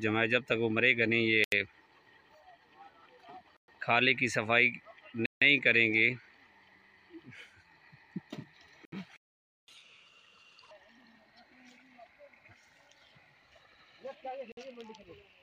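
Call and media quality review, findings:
Short cuts to silence at 1.44, 3.57, 5.26, 8.85 and 14.52 s, each 53 to 155 ms, with the sound resuming where it stopped. Bluetooth stall, likely interference delaying packets until the headphone buffer ran dry and the resent packets arrived.

A dead gap of about half a second, 9.17 to 9.68 s, where the sound halts mid-flow and then continues. Playback stall, likely the player running out of data or its thread blocking, so output stays silent until recovery.

From 9.68 to 10.71 s the audio runs fast at 1.5x, pitch raised roughly seven semitones, then it drops back to normal. Catch-up at higher speed: the player resamples its backlog after the 9.17 s stall to win back lost time.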